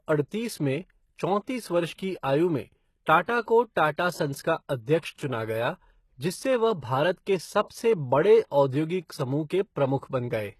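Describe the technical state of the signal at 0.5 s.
At 0.5 s the speech already shows the gritty, lispy treble and empty band above 12.3 kHz that runs throughout, likely HE-AAC compression near 16 kbps rebuilding highs from copied lower bands.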